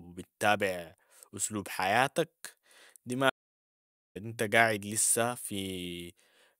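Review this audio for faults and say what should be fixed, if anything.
An audio dropout to silence runs from 3.30 to 4.15 s, removing about 0.85 s of speech. The input was likely lost while recording continued, writing silence. Unlike a pause or noise gate, room tone vanishes completely and both edges cut abruptly. Secure connections and monitor input levels during recording.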